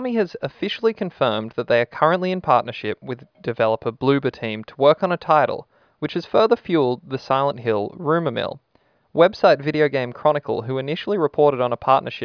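No technical faults can be heard anywhere in this speech recording. The audio continues without any interruption or disturbance from beginning to end.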